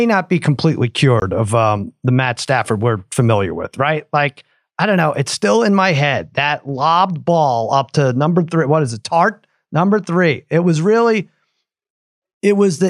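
A speech clip with one block of digital silence from 1.20 to 1.22 s, after "not be completely" and before "of um the". The 20 ms hole starts and stops abruptly; unlike a fade-out or concealed packet loss, nothing smooths or fills it.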